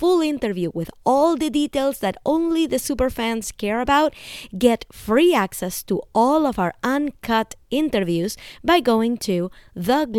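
No audible technical faults turn up anywhere in the speech; nothing in the signal chain calls for comment.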